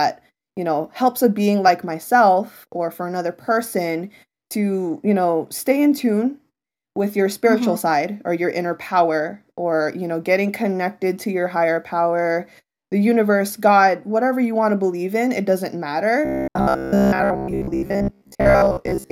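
It's a speech clip, and from 16.25 s to 19.12 s, right after "believe in it doesn't", it goes into robotic sound from repeated short buffers: a stiff metallic buzz near 66.7 Hz. Most of that stretch is likely 15 ms chunks being repeated while fresh audio arrives too slowly.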